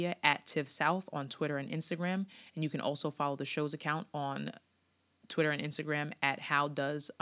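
Speech recording with no technical faults audible.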